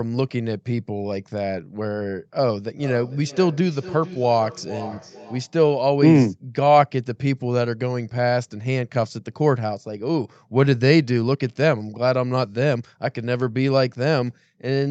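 From 2.77 s to 5.61 s the speech comes back on itself at intervals of about half a second, each repeat thinner and more ringing than the last, with the loudest sitting about 15 dB below the direct speech. That is feedback echo between two devices: a second device on the same call plays the audio aloud, the first microphone picks it up again, and its echo canceller, which only removes its own playback, lets the loop through. Across the clip the top end stops near 8 kHz, as expected on this call path.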